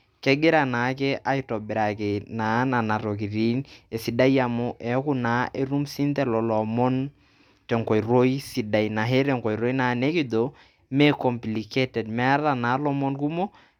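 A speech recording with no technical faults to report.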